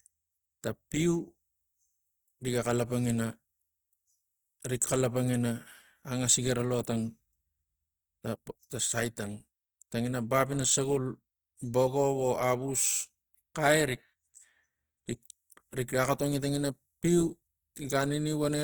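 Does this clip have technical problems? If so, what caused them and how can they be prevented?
Yes. Throughout the speech, the sound is grainy and rough, with plainly audible codec damage while the bandwidth stays fullband up to about 20.4 kHz. This points to Opus compression in its CELT music mode, likely at around 24 kbps, where noise-filled bands replace detail. Encoding at a higher bitrate, or using Opus's voice setting for speech, would prevent this.

At 6.83 s there is pre-echo, a brief hiss smeared about 15 ms ahead of a sharp attack. The transform codec spread quantisation noise sized for the loud onset across its whole block, including the quiet moment before it. A higher bitrate, giving the encoder more room on transients, would prevent it.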